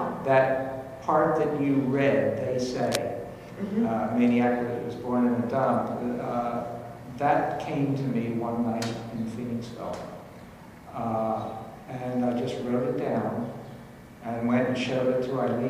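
A worn cable or connector was likely shifted around 2.80 to 2.97 s, its contact resistance jumping rapidly and causing cable scratch noise: a dense, uneven burst of scratching and rustling, only slightly quieter than the sound itself, lasting under a fifth of a second.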